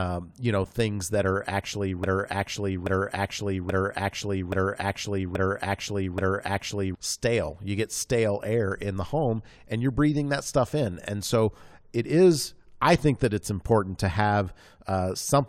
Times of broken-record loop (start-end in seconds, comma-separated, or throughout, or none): 2.04-6.95